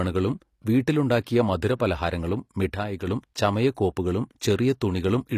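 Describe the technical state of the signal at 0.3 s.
At 0.3 s the signal likely passed through HE-AAC compression, which runs through the whole clip. The codec encodes only the lower spectrum and fills the treble by spectral band replication, copying lower bands upward, which fits a low bitrate around 24 kbps. The damage is plainly audible: nothing reaches above 14.9 kHz, and the rebuilt treble turns s sounds gritty, metallic or lispy.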